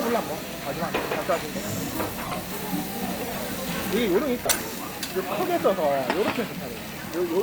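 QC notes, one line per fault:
0.96–1.04 s, 2.25–2.36 s, 3.27–3.38 s and 4.45–4.58 s: corrupt frame decoded. Each burst spans a handful of damaged compressed frames played with misread gains and codes. The result is chirps or noise blips peaking at about −25, −15, −20 and −5 dBFS. On a spectrogram these appear as short vertical smears at misplaced frequencies, and on the waveform as brief spikes.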